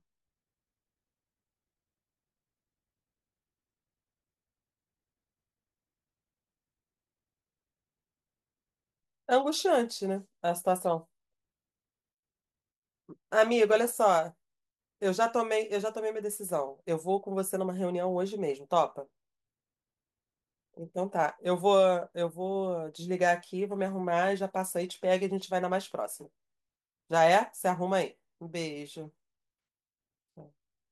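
No technical faults are audible anywhere in this recording.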